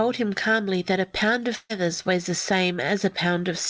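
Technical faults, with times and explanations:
1.56–1.71 s, burst of packet loss: about 140 ms of consecutive packets arrived too late or not at all. The receiver extended the last sound for 135 ms while fading it, then left 30 ms of silence before the speech resumes with that portion missing.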